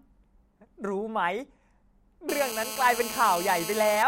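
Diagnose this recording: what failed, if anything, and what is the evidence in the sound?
GSM phone buzz enters in the analogue stage, from about 2.29 s to 4.03 s. A hard, raspy buzz sits under the speech at about 9 dB below it, repeating at roughly 217 Hz with a dense stack of harmonics. It holds steady throughout, which fits a nearby 2G phone in an active call: its transmit bursts are rectified by the audio circuitry and demodulated into this pulse train. Mains hum would be smooth and locked to 50 or 60 Hz and their multiples, not a gritty 217 Hz rasp.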